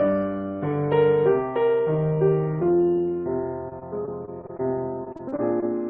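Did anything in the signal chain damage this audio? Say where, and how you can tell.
Yes. Repeated packet loss (robotic sound) occurs at 3.69–4.61 s and 5.05–5.64 s, a network-stage fault. Lost or late packets leave gaps of up to 20 and 32 ms. Each gap is patched by extending the preceding sound, giving choppy stretches.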